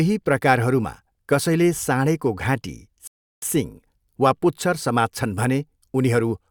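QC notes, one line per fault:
3.07–3.42 s, rebuffering stall. The speech stops dead and the line goes silent for about 0.35 s. It then picks up at exactly the point where it broke off. No syllable is skipped or repeated. The player had used up its downloaded audio and had to wait for more data before going on. That is why the gap is clean silence rather than a glitch. The clip loses no content, but it runs 348 ms longer.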